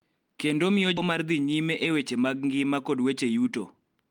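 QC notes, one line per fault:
0.97 s, skip ahead: playback jumps forward with no gap filling the join, so roughly 0.4 s of the speech never plays and the audio on either side is butted almost directly together. The missing stretch was discarded while later audio was already queued, either lost in transit or dropped by an overflowing jitter buffer, which is why the timing shortens abruptly by about the same amount instead of pausing or glitching audibly at length.
2.89 to 4.10 s, jitter buffer speed-up: from here to the end the speech runs about 10% faster while its pitch stays unchanged, giving a hurried delivery. The buffer was holding more audio than its target, so the receiver trimmed many short pieces, each one or a few pitch periods long, in quick succession. Altogether around 150 ms is removed, shortening the speech without the pitch shift a simple resampling would cause.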